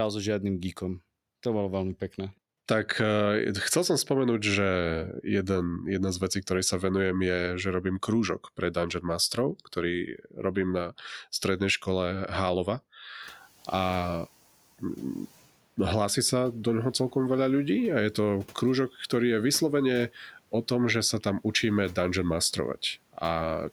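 Speech, with the noise suppressor cutting speech from 10.07 to 10.44 s: about 200 ms of soft sound is dipped by up to about 12 dB, seen as thinned, faded patches in the spectrogram. At 13.22 to 13.43 s the noise suppressor is catching up after room noise jumps about 23 dB around 13 s; the noise shows brightly, then darkens as the suppressor adapts over 210 ms and cuts it by 8 dB.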